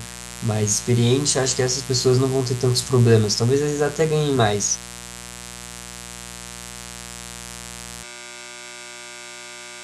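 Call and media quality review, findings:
Mains buzz, whole clip. Steady raspy 60 Hz buzz with harmonics climbing into the kHz range, sitting only about 15 dB under the speech, so it's hard to miss. Spiky twice-per-cycle pattern points to a dimmer, rectifier or unshielded run coupling switching spikes into the line. Worth chasing at the source rather than notching it out.

Switch to a distant microphone, 8.05 s to end. Sound abruptly turns roomy and hollow, low end thins out, and room noise comes up to roughly 35 dB under the speech. Level stays about the same, so it's the tone change that gives it away. Likely the close mic dropped and the feed fell back to a farther one, e.g. the camera mic. No switch back before the clip ends.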